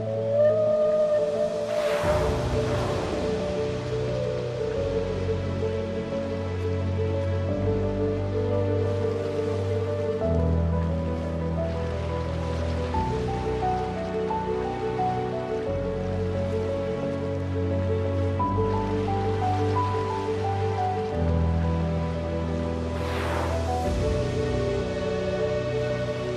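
Nothing goes wrong anywhere in this recording, so there's no fault to trace through it.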